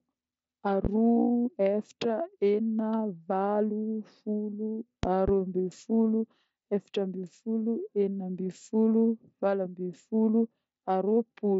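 At 0.85 s and again from 5.03 to 5.31 s, a loud pop stands about 15 dB above the speech, the second one a double. It is likely a voltage pulse from a plug, switch or static. Unlike a dropout, the speech carries on underneath.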